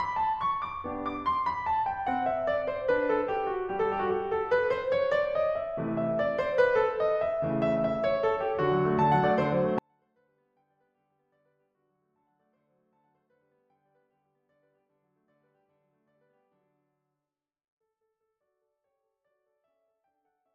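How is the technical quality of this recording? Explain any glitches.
The music's technical quality falls apart halfway through. From about 9.79 s to the end it suddenly drops by about 48 dB yet stays clean, which is a 24-bit alignment error: 24-bit samples sitting in the low bytes of 32-bit words are being read as full 32-bit values, so everything lands roughly 256 times too quiet and the back half is close to inaudible.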